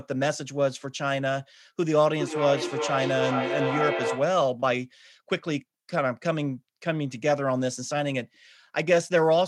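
Feedback echo between two devices runs from 1.85 to 4.44 s. Two devices on the same call sit in one room, so one device plays back what the other's microphone sent, and that microphone captures it again. Each echo canceller removes only its own device's playback, so the loop goes unchecked. The sound returns at a steady interval of roughly 0.4 s, each pass thinner and more ringing, peaking about 5 dB below the speech.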